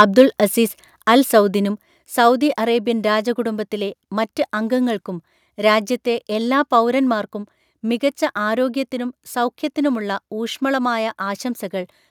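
From the very start to 0.22 s, just before "അസീസ് അൽ സൗദിനും സൗദി", the speech carries a harsh, crackling edge typical of microphone overload. The input was likely set too high, driving peaks roughly 4 dB past the converter's limit so their tops are sheared off, with around 2 percent of samples flattened. On a waveform the loudest cycles show flat plateaus where they were cut off. A spectrogram shows smeared broadband energy reaching into the upper kHz range at those moments.

At 1.02 s, just before "അൽ സൗദിനും സൗദി അറേബ്യൻ", the microphone volume is stepped down. Voice and background together drop by about 4 dB in one instant, likely because the call software reacted to the earlier clipping by lowering the device's input level. The waveform envelope shows an abrupt downward step rather than a gradual fade, and the spectrogram turns uniformly dimmer across all frequencies from that point, with no change in its spectral shape.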